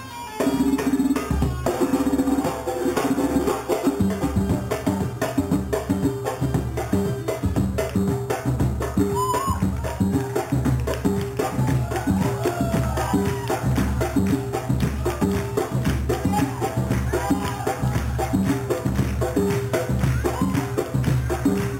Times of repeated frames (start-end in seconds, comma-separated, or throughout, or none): none